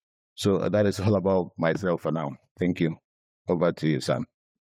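A speech recording, and nothing is technically wrong with it.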